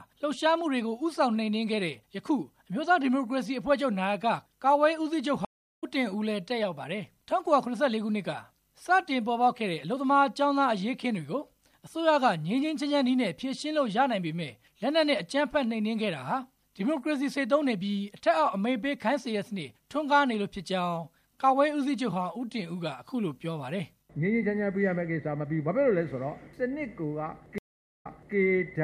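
Stream reconnects at 5.45–5.84 s and 27.58–28.35 s: the connection drops, the audio falls silent, and playback restarts with a fresh decoder. The first gap lasts 348 ms and resumes roughly a third of a second ahead. The second lasts 428 ms and resumes 340 ms earlier, repeating that stretch.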